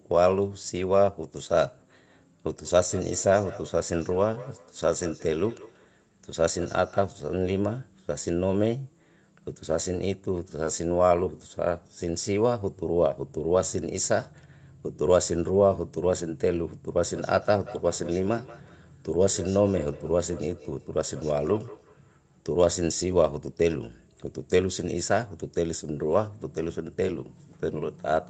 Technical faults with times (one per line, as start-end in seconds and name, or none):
2.65-7.14 feedback echo between two devices
16.89-22.41 feedback echo between two devices